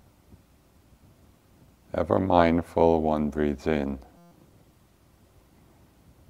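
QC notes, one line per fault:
4.17–4.31 s, system hang loop: a steady 172 Hz buzz as one 5.8 ms slice, consistent with a 256-sample buffer, repeats 24 times; about 150 ms of audio lost.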